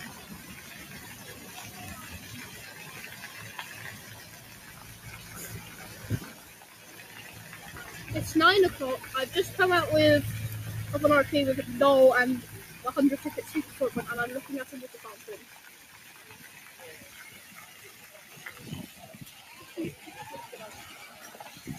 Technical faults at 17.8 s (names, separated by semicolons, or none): noise suppressor applied to music or sounds; sound cut by the noise suppressor